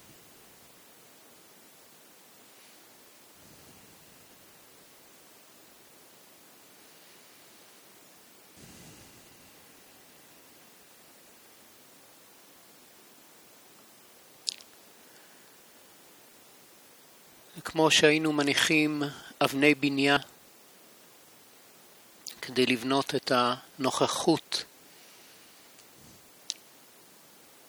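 Audio missing between chunks occurs at 8.57 s, 20.17 s and 25.97 s. At each point the sound jumps forward abruptly, losing roughly a fifth of a second, and the material on either side is butted together with no silence. The likely cause is a recorder or processor handling the audio in 6-second blocks and dropping a short stretch each time it closes one block and opens the next. The spacing of the skips, 5.8 s between the last two, fits that block length.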